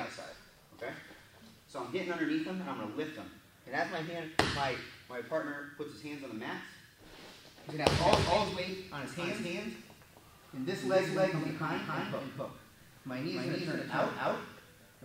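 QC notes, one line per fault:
7.84 s to end: doubled audio track. From 7.84 s a second full-band copy of the sound appears abruptly and runs to the end, trailing the original by roughly a third of a second at about the same level. The copy carries no decay or room colouring, so it reads as a hard, distinct repeat, not as reverb or a natural echo. The likely cause is the same signal being captured again through a slower path, or two copies left out of step in an edit.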